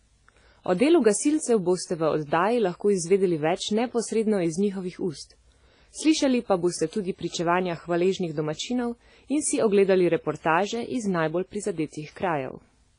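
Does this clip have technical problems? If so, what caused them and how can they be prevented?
Yes. WMA compression damage runs through the whole speech clip. The audio rings and sounds washy, with a hiss that swells and fades with the signal, and nothing is present above 10.1 kHz. The likely cause is a low-bitrate Windows Media Audio encode. Its long transform blocks smear quantisation noise over tens of milliseconds, and weak spectral lines are zeroed out. The heavy damage fits a rate around 24 kbps. To prevent this, record or export to a lossless format, or encode at a much higher bitrate with a modern codec.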